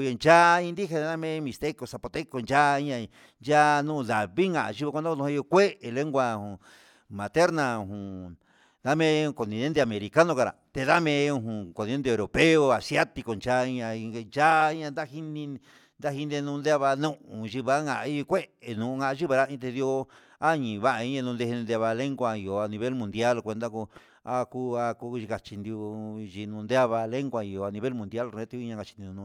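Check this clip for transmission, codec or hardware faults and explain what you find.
Nothing in the speech signal points to a transmission, codec or hardware problem.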